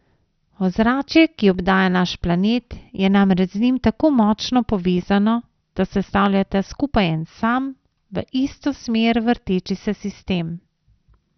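Throughout the speech, the encoder has likely run short of bits for MP2 compression. It has switched off whole upper sub-bands, leaving nothing above 6.2 kHz. The heavy damage fits a rate near 48 kbps and leaves the speech dull and gurgling, with granular texture as the surviving bands flicker.

At 4.75 s and again at 6.26 s, dropped samples likely break the stream, and the waveform jumps ahead by a fraction of a millisecond. Each gap is far too brief to remove any sound, so each is heard as one sharp click.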